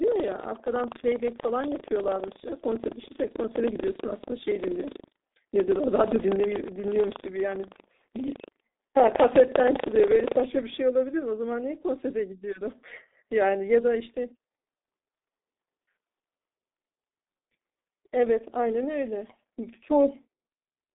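Speech that sounds muffled and hoarse from start to finish, with soft, smeared consonants and nothing above about 3.8 kHz. The band runs from roughly 250 Hz to 3.7 kHz, and the heavy damage is typical of the G.723.1 codec at 6.3 kbit/s, whose 30 ms frames track the voice too slowly. From 0.0 to 10.46 s a rattling 25 Hz buzz rides on the speech and drops out in pauses. That is buffer tearing: writer and reader cross inside every period, so a small slice of each buffer replays audio from roughly 150 ms earlier.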